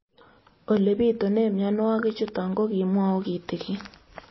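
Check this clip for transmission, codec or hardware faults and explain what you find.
One codec fault runs throughout. Across the whole speech clip, likely MP3 compression at a low bitrate, consistent with about 24 kbps, cuts everything above 5.8 kHz and toggles weak spectral lines, giving a dull, watery, swirling sound.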